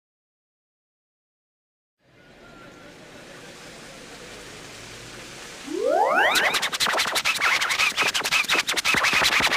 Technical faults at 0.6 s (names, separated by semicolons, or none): doubled audio track